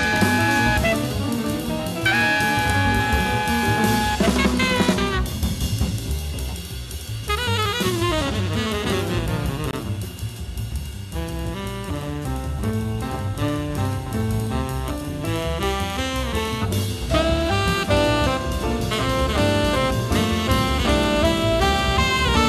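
The audio has a gap at a join of encoded pieces, from 9.71 to 9.73 s, about 22 ms long. The material was encoded as separate pieces and then joined untrimmed, so the encoder's start-up silence and the padding of the final frame both remain at the seam. Codec smearing softens the edges, so this may show as a brief silence or only a deep dip. On a waveform it appears as a narrow notch; on a spectrogram, as a thin vertical band with the sound resuming where it stopped.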